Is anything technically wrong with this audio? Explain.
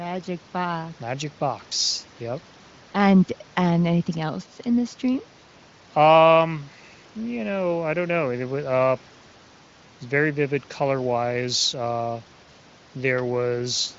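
No, nothing's wrong here: the speech comes through the AMR wideband (HD Voice) codec at 23.05 kbit/s, near its top rate, with the band topping out around 7.6 kHz as you'd expect from that path.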